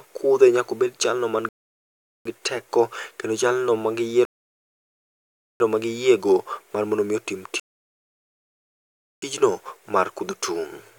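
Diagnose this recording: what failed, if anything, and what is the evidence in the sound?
Rebuffering stall during network playback: silences at 1.49–2.25 s (after "nyaka bed jalno ma"), 4.25–5.60 s and 7.60–9.22 s. The buffer emptied, and speech resumes exactly where it stopped, adding time rather than losing audio as a dropout would.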